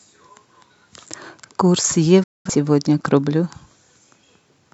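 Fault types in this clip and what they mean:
Digital broadcast dropout: from 2.23 to 2.50 s the speech fades to silence over about 8 ms and then comes back. The receiver stopped getting usable data, either because the signal was lost or because frames failed their checksum, so it muted until valid frames arrived again. Roughly 0.21 s of the programme is missing, which fits about five lost frames. When the sound returns it picks up later in the programme, and whatever was sent during the gap is gone.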